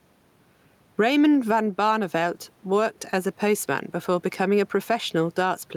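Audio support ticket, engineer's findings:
Gain pumping, throughout. Gain swing around 10 dB; dynamics squashed. Likely cause: input gain far too high, fast limiter clamping every peak. Room noise, about 45 dB below speech.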